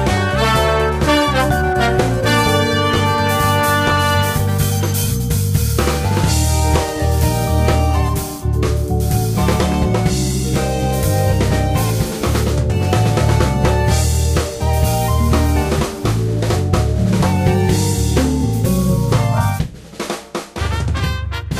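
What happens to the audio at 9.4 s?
Nothing goes wrong at 9.4 s: the audio carries straight through that moment intact, with no dropout, click, distortion or other audible fault.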